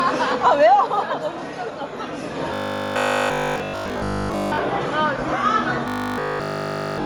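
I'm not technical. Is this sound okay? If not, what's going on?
No. Throughout the whole clip the sound has a grainy, hissy edge. That points to Bluetooth LC3 compression, the squeeze applied to audio sent over newer Bluetooth links. To save space, the codec throws away much of the high-frequency detail and fills the gap with noise, and that rough texture is plainly noticeable here.

Twice the sound turns into a stiff, metallic buzz, first from 2.54 to 4.58 s and again from 5.88 s to the end. This is robotic sound from repeated short buffers, likely because fresh audio was arriving too slowly. The playback filled the gaps by looping a tiny 20 ms slice over and over, which forces a steady 50 Hz hum onto the sound. During those stretches essentially none of the real audio gets through.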